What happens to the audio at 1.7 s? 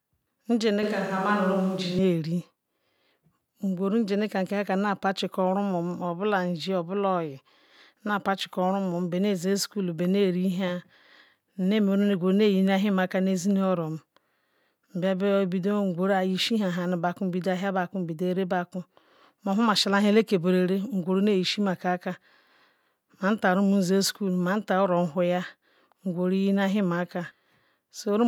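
At 1.7 s the speech is inside a switch to a distant microphone, running from 0.83 s to 1.98 s. The close pickup's signal likely dropped out, leaving a microphone set further back to carry the recording. The voice turns abruptly roomy and hollow, with thinner low end, while its level stays about the same. Room noise rises to about 30 dB below the speech. The return to the close sound at 1.98 s is equally sudden.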